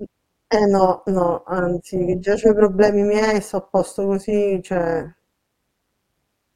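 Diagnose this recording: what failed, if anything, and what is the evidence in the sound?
Overlap-add ripple in the processing stage runs through the whole speech clip. The level swings by about 11 dB at a rate of around 200 Hz, which gives a metallic buzz with extra tones around each note. The windowed frames were reassembled with an overlap that does not sum to constant gain. Unlike a slow amplitude modulation, the ripple is locked to the frame rate.

Lost LE Audio frames on the Bluetooth link cause a brief noisy smear at 0.97 s. Roughly 15 ms of audio is gone, which fits a couple of dropped frames. The LC3 decoder filled the gap by reusing the last spectrum with randomised signs, so the result is a noisy smear rather than a hard click or a silent gap.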